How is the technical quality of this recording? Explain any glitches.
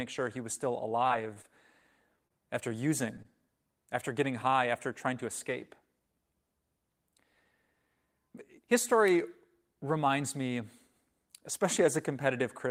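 The recording has three network-related glitches, all in the first few seconds of the speech.

From 0.99 to 1.82 s, just after "sure he was still", there is repeated packet loss with a robotic sound. Five separate gaps hit this stretch. The longest is 23 ms. About 60 ms of real audio is missing. The receiver patched each hole by extending the last sound, so about a tenth of the span is synthetic. It sounds choppy, with small pieces dropped.

At 2.27 to 2.32 s there is a short stall from a late packet. A packet arrived about 29 ms late. The jitter buffer ran dry, so the receiver held the last sound until the packet came in. Then it resumed exactly where it left off. Nothing is lost. One sound is simply held a touch too long, with a slight buzz or dip.

From 3.22 to 3.26 s there is a short concealed packet loss. About 20 ms of audio never arrived in time. The decoder filled the hole by continuing the preceding sound and then blended back into the real signal. 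It comes across as a brief smear or wobble. A short consonant could be clipped here.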